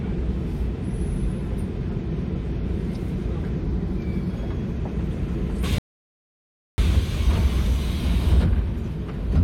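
At 5.78 s the sound drops to silence. It stays silent until 6.78 s, a gap of about one second. This is a rebuffering stall. The player used up the audio it had downloaded and had to wait for more data. When enough arrived, playback picked up exactly where it stopped. No sound is skipped or repeated. The only damage is the added second of dead air in the middle of the clip.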